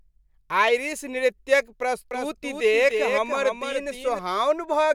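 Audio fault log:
2.11–4.19 s, doubled audio track: a full-band copy trails by about 300 ms at roughly 5 dB lower, likely from a second, slower capture path; the spectrogram shows every feature repeated, with abrupt onset and cutoff.
2.91 s and 3.73 s, dropped samples: a fraction of a millisecond goes missing, likely from a stream glitch, so the waveform jumps to a later value, giving a sharp click and a thin vertical spectrogram line.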